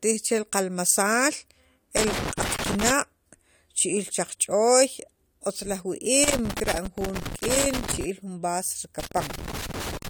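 Irregular bursts of crackle and scratching break up the speech from 1.97 to 2.91 s, 6.24 to 8.04 s, and 9.00 s to the end. This is loose connector crackle: a worn or dirty contact making and breaking, chopping the signal, with any DC on the line adding pops.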